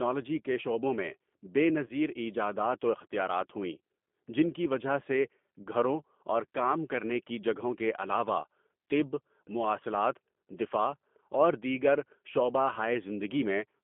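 From start to finish the speech passes through the G.729 codec, which rebuilds each 10 ms frame from a vocal tract filter, a pitch predictor and a handful of pulses rather than sending the waveform, and which points to an 8 kbit/s G.729A line. The band is held to roughly 200 Hz to 3.4 kHz, so the sound is thin and muffled, and the coarse pulse coding gives it a plainly rough, slightly synthetic edge.

At 1.86 to 1.93 s, and again at 5.63 to 5.68 s, there is VoIP packet loss concealed by the speech codec. Each gap fits a single lost packet carrying about 30 ms of audio. The decoder fills it by repeating its last pitch and filter at falling gain, so the sound smears into a short buzzy tone or coloured noise that fades. Because each frame is built on the previous one, the speech stays weak or distorted for a moment after the gap.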